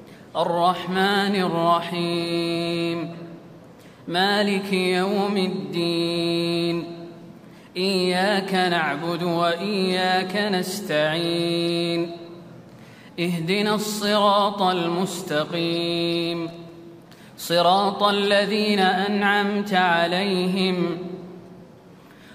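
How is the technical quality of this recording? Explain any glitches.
One glitch stands out: a burst of loose connector crackle from 16.48 to 16.70 s, lasting about 0.22 s. A worn or dirty contact in the cable path keeps making and breaking as it shifts, so the sound is chopped on and off in quick, uneven bursts. Unlike evenly spaced digital clicks or a clean dropout, it is ragged and scratchy, with no regular timing.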